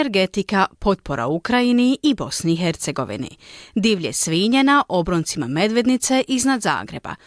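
A short bit of speech, and there's nothing technically wrong to point to anywhere in it.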